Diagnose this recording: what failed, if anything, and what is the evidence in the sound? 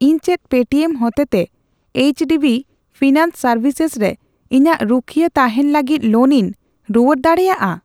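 Nothing failed; no fault is audible in this speech.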